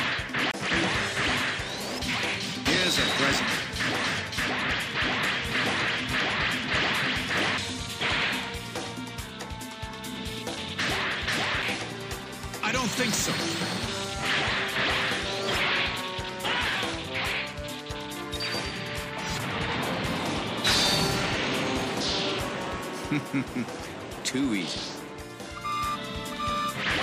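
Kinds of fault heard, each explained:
CD skip: the laser got knocked or hit a flaw on the disc and jumped to a different turn of the spiral, so the player mutes for a moment and resumes from another spot. It happens three times here: from about 0.51 to 0.54 s, with a gap of roughly 30 ms, then at 7.58 s and 11.62 s, where the drop is only a few milliseconds and comes across as a tick before the sound carries on from elsewhere.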